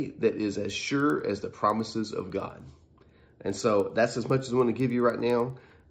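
Resampler restarted on every block, from 0.6 s to the end: each 100 ms block was converted in isolation, likely an upsampling to 48 kHz, so every block edge lacks its true neighbouring samples. The resulting edge errors give a steady tick at 10 Hz beneath the sound.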